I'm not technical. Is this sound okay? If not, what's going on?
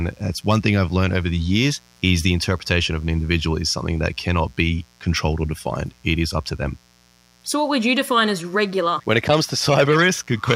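No. A mains buzz runs through the whole recording, a steady, raspy noise sitting quietly underneath the speech from start to finish. It comes from the electricity supply, which alternates 60 times a second. Something like a light dimmer, a power adapter or an unshielded cable lets sharp electrical spikes leak into the audio. What sets it apart from a plain hum is its gritty, buzzy edge rather than a smooth, deep drone.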